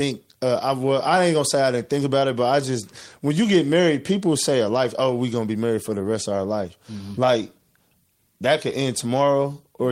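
Nothing in this speech recording stands out as a technical fault, so there's no problem to point to anywhere along the way.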